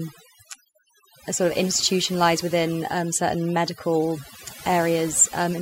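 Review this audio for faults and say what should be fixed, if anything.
Overdone noise removal runs throughout: background collapses to near silence with twinkling specks, unlike plain gating, while quiet speech bands vanish. Prevent it by setting reduction strength lower.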